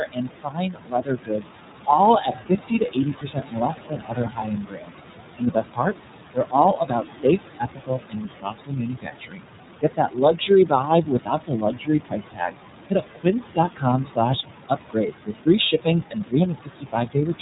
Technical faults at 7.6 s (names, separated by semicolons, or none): noise suppressor artifacts; iLBC codec; speech cut by the noise suppressor